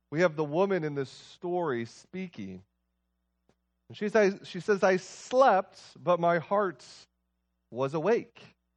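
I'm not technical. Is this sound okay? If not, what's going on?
Yes, nothing wrong can be heard in this speech recording.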